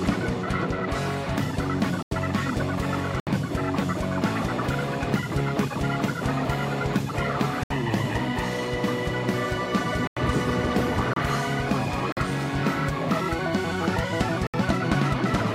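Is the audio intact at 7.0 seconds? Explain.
Yes, the audio at 7.0 seconds is intact, with no dropout, click, distortion or other fault at that moment.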